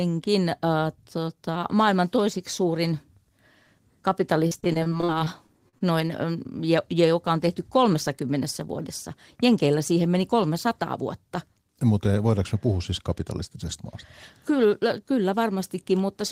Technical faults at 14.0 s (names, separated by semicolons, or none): none